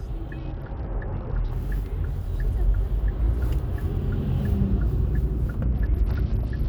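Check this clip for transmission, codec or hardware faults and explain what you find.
Two Bluetooth SBC bit pool drops occur, at 0.38 to 1.51 s and from 5.63 s to the end. The link likely congested, so fewer bits were sent, which fits a bit pool cut from 31 to 8, near 66 kbps. High sub-bands starve. The treble dulls and gritty noise rises.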